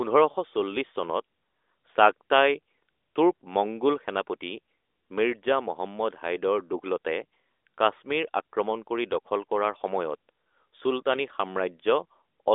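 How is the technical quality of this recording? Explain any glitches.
No audible glitches or faults.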